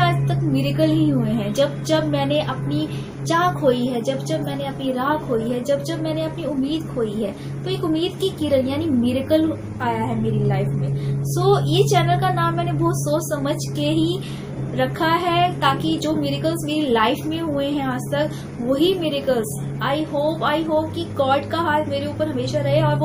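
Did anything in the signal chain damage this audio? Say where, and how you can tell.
Yes. Clock slip clicks run from 0.11 s to 23.04 s as a soft rattle of single-sample ticks about every 40 ms. The likely cause is two converters on unsynchronised clocks about 700 ppm apart, dropping or repeating one sample each time the drift adds up to a whole sample.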